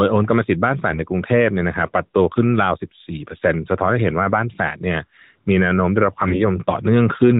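AMR bit errors at 0.88 to 1.00 s and again at 6.20 to 6.42 s: the link corrupted a couple of percent of the bits in the narrowband mobile stream, hitting the less protected parts of each frame while the core checksum still passed. The decoder accepted misplaced excitation pulses and skewed pitch, gain and spectral values, so the speech keeps its rough pitch and loudness but turns hoarse, scratchy and gargly in both short stretches.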